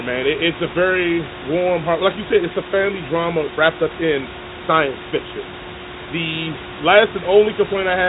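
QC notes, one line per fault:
No faults heard.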